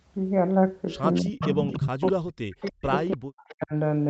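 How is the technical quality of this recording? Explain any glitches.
The quality is patchy. It sounds like a speakerphone call with both sides talking at once, with the audio topping out around 8 kHz, which fits a typical Opus call path.

Speech suppressed in double talk, from 1.21 to 2.92 s and again from 3.15 to 3.73 s: the level dips hard, by up to about 40 dB, for roughly a second and a half, then half a second. The likely cause is the echo canceller failing to tell this talker apart from loudspeaker echo and ducking everything.

Echo leak at 1.39 to 1.51 s, 1.71 to 1.88 s, 2.53 to 2.89 s and 3.11 to 3.17 s: brief scraps of a copy delayed by 290 ms slip through, about 10 and 5 dB below the speech early on, then about 25 dB below. That's likely the far end's canceller not fully removing its loudspeaker pickup.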